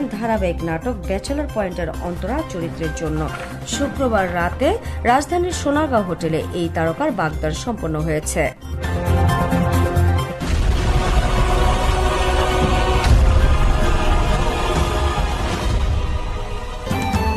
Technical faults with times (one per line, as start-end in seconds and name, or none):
none